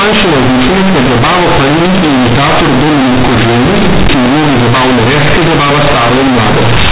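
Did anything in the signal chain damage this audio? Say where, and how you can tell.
Yes. The speech sounds very loud and harshly buzzy from start to finish, and heavy noise fills the pauses. The damage is at the sample-format conversion stage. Companded audio has been read as linear: mu-law bytes are played as plain 8-bit samples with no expansion. Every sign change then swings across half the range, which flattens quiet and loud passages to the same level.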